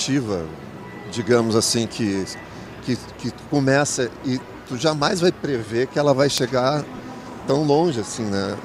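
At 6.98 s there is a brief glitch from lost LE Audio frames. The gap lasts 7.5 ms, which fits a single dropped LC3 frame on the Bluetooth link. The decoder covered it by repeating the previous spectrum with scrambled signs. Because the loss is so short, it never fades toward silence. The clip also carries light lossy compression.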